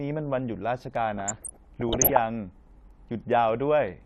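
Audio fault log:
1.17–2.17 s, DAB burbling: bubbling, squelching chirps over the speech, as bit errors from weak reception pass error correction into the MP2 data. Corrupted samples put short noise blips in single sub-bands and corrupted scale factors make sub-bands jump in level, which fits several dozen damaged frames.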